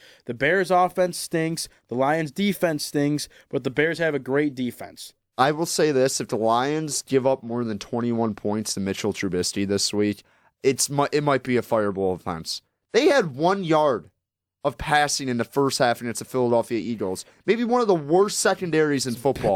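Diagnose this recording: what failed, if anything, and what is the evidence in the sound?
Nothing in the signal chain shows a failure; across the whole speech recording there are no dropouts, clicks, level jumps or other audible evidence of a fault at any stage.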